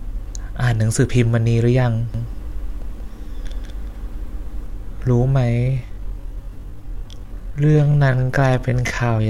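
A speech recording with two faults. A second capture path or an out-of-step edit likely mixed the audio in twice, producing a doubled audio track from 2.14 to 4.66 s: a full-band copy trails around 200 ms behind, about 5 dB quieter, with no decay or room colour, and cuts in and out abruptly. From 5.40 s to the end, software likely stretched the audio by repeating short pieces to fill a longer span, giving a time-stretched section. The pace drops abruptly to 0.614 times normal speed while the pitch stays put, leaving the speech dragging.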